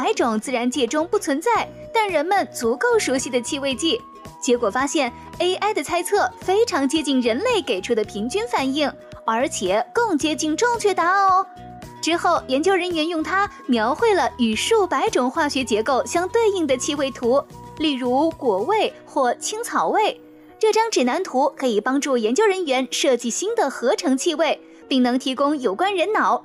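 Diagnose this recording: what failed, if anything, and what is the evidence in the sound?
Nothing here points to a failure at any stage, so there's no fault to diagnose and nothing in the sound that needs chasing down.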